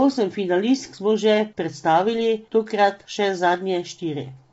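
From start to finish the speech has a rough, grainy edge with noise creeping between the harmonics and nothing above 7.8 kHz. That's likely low-delay AAC compression, whose short frames blur pitch detail at a bitrate that sounds near 24 kbps.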